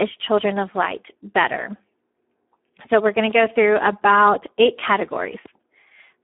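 From start to end the speech carries heavy Speex codec damage, hoarse and buzzy, with narrowband limits near 250 Hz to 3.4 kHz, nothing above 3.8 kHz, fitting roughly 8 kbps.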